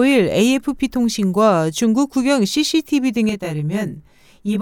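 From 3.29 s to the end, channel delay (comb filtering) makes the speech sound rough and slightly doubled: one channel arrives roughly 20 ms late, and the mono sum cancels at evenly spaced frequencies from around 30 Hz upward. A spectrogram shows fixed, regularly spaced horizontal notches.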